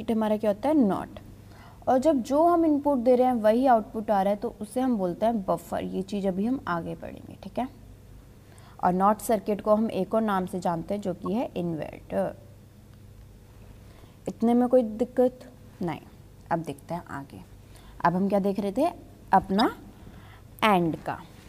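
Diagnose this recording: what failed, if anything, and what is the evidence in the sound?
The failure is at the codec stage: corrupt frame decoded. A short glitch sits at 11.26 to 11.28 s, peaking around -25 dBFS. A longer, louder glitch runs from 19.51 to 19.64 s, peaking around -15 dBFS. The lengths point to a couple of damaged frames, then several in a row. Flipped bits scrambled the gains and spectral codes. The decoder played them anyway, spraying energy into the wrong frequencies.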